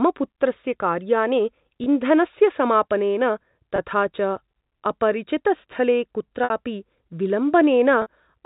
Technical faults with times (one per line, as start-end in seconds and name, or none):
1.84-1.86 packet loss with pitch repetition
3.76-3.78 packet loss with pitch repetition
6.44-6.50 packet loss with pitch repetition
8.02-8.06 packet loss with pitch repetition